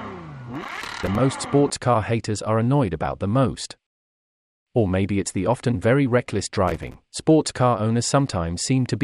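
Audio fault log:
0.55–1.15 s, processor overload crackle: a gritty burst where the processor kept missing its deadlines on buffers of a few milliseconds, about thirty in all, each dropping to a tiny silent gap with hard edges.
6.68–6.94 s, processor overload crackle: same thing, shorter, around twenty missed buffers.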